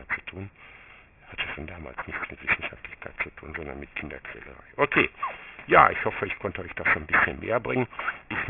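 The sound is gritty and metallic throughout, with harsh, unrelated tones crowding the top of the band and reaching roughly the level of the wanted content. This is aliasing: energy above 3 kHz folded back downward, which fits a drop from 48 kHz to 6 kHz sampling without an anti-alias filter.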